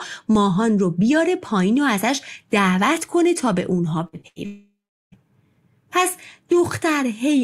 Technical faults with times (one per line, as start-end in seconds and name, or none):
4.07-4.38 burst of packet loss
4.21-4.26 short concealed packet loss
4.46-5.18 long network dropout